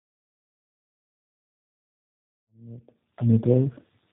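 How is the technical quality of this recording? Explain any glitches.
The quality is limited by one fault throughout the clip: tandem speech coding. The speech was decoded and re-encoded across several low-rate speech coders in a row, each working on the previous one's degraded output. The roughness and warble point to three such stages, which fits G.729A at 8 kbit/s at both ends with G.726 between. Nothing is present above 3.8 kHz, so the speech sounds muffled, rough and watery.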